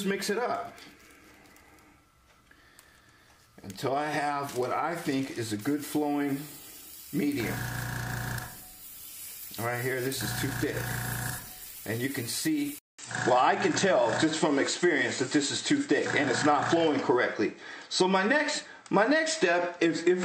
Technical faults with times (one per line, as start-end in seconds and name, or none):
12.79-20.25 input switched to a poorer device